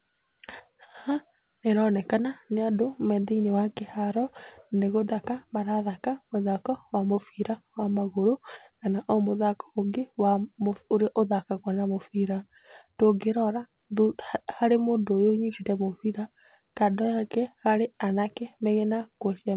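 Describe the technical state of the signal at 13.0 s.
At 13.0 s the speech is intact, carried through the call path with its narrowband G.711 A-law coding and nothing above 4 kHz, and with no fault at that moment.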